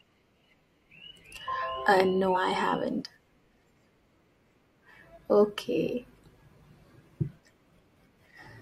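At 2.33 to 2.37 s, just after "uh no", damaged data in the compressed stream produces a short glitch. Corrupted bytes there leave the decoder unable to read those frames correctly, so it loses sync and scans forward for the next valid frame header.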